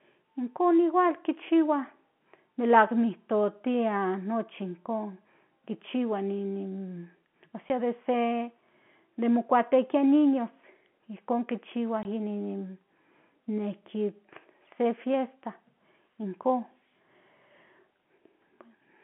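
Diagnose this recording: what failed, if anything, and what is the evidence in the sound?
Network stage: packet loss filled with silence. You'll hear a hard-edged hole at 7.69 s, just before "de se", and a 20 ms one at 12.03–12.05 s after "in niños ijkon kichihua". Those sizes fit a 10 ms packet, and the receiver played silence in their place.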